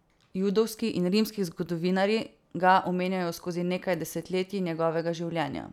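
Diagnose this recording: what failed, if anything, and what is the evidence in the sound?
Listening through this speech recording, nothing stood out that would point to a failure at any stage of the chain.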